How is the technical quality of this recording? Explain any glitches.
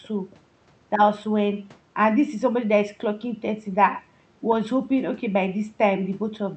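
Listening closely, nothing in the recording's technical quality stood out as a problem, and there are no glitches to explain.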